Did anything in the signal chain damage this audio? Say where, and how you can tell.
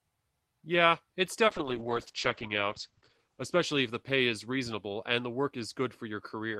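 Yes, there's a call bitrate drop from 1.48 to 4.97 s, where the codec stage gets starved. The sound turns rough and muffled as the top end collapses from about 20 kHz down to 8 kHz. That fits the encoder being pushed from roughly 48 kbps to 9 kbps after the bandwidth estimate fell, bottoming out for about 1.17 s. With so few bits, Opus quantises coarsely and drops the highs until the rate climbs back.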